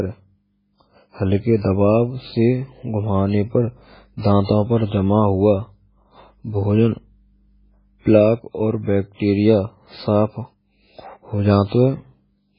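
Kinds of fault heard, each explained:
MP3 compression: The speech runs through the whole clip with a hard ceiling, nothing above about 5.2 kHz, and heavy codec damage: a watery, swirling texture where weak frequency components drop in and out between frames, with s sounds turning metallic and consonant onsets smeared. That fits a very low bitrate, around 16 kbps, likely from MP3 encoding. A plain low-pass filter would dull the top the same way but leave the remaining sound steady, without the warbling.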